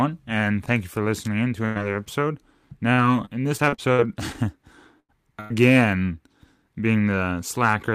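At 1.65 s a burst of packet loss occurs: about 100 ms of audio is lost, and the receiver stretches the last sound into a fading buzz or hiss before the speech resumes further along, with the skipped part simply gone. The same burst pattern recurs at 5.00 s and 5.41 s, each about 80 to 100 ms missing.

Between 2.93 s and 4.36 s, repeated packet loss produces robotic sound: seven short gaps, the longest about 63 ms, are each patched by extending the preceding sound. The speech turns choppy, with about 240 ms missing overall.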